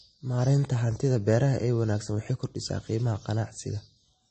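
Transcoding between lossy codecs is the likely cause of what runs through this speech clip from start to finish: the sound seems to have been coded at a low MP3 rate, around 33 kbit/s, and then re-encoded as AAC-LC at about 48 kbit/s. Nothing survives above 8.4 kHz, so the top end sounds dull. The second codec spends bits re-coding the first one's artefacts, then adds its own, and both layers of artefact are heard together.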